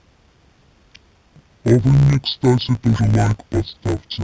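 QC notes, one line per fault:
Throughout: interleaved audio read as planar. The speech sounds dull and robotic, with a steady buzz at 62.5 Hz and no clear drop in pitch. Each 16 ms block holds alternating left and right samples. The reader takes the first half as left and the second half as right. So each half plays at half speed, yet the pace holds. The blocks are short, which fits a 256-sample buffer. The block edges produce the buzz instead of an octave shift.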